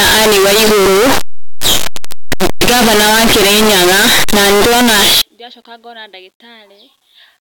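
From 0 to 5.2 s, just before "ndĩracoka ngona", the speech is blasted into loud, harsh distortion with soft sounds as loud as strong ones, likely signed and unsigned mixed up on 8-bit samples.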